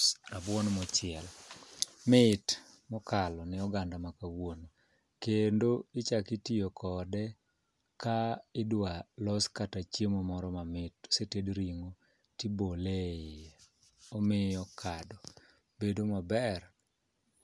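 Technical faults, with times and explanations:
No technical faults, with times and explanations, can be given here, since none are heard in this speech.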